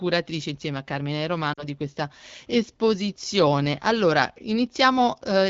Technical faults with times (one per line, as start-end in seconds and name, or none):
1.53-1.64 lost AMR speech frames